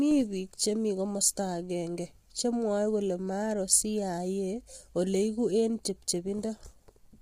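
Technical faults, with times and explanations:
Throughout, low-delay AAC compression: the speech sounds rough and grainy for the whole clip, with a noisy fill between the pitch harmonics and a top band that sounds thinned and partly synthetic. The heavy damage points to a low bitrate, around 24 kbps, with AAC-ELD the likely codec. Its short frames give too little frequency resolution to separate the harmonics cleanly, and the few remaining bits leave quantisation noise between them while the upper band is rebuilt only approximately.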